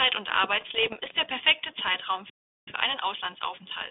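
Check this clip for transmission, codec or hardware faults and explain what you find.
Three faults are audible in this band-limited telephone speech, which carries the light coding damage that fits 32 kbit/s G.726 ADPCM.

Bit errors on an ADPCM link, 0.56 to 1.26 s: flipped bits at around half a percent upset the decoder's step size and predictor, producing pops, rough bursts and brief level jumps.

Playback stall, 2.30 to 2.68 s: the speech cuts to silence for about 376 ms, likely because the player ran short of data or its thread was blocked.

Time-compressed catch-up, 2.68 s to the end: the player sheds its backlog by splicing out small pieces, so speech runs about 1.1 times fast at normal pitch.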